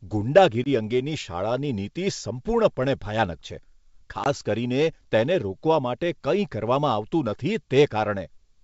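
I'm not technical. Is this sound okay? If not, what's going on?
No. There is packet loss on an ADPCM call at 0.64 s, just before "અંગેની શાળાની નીતિ સંપૂર્ણપણે", and again at 4.24 s. Each time a small chunk of sound, about 20 ms, drops to silence. The receiving end then briefly guesses wrong about loudness, so the speech returns with a slight click or roughness.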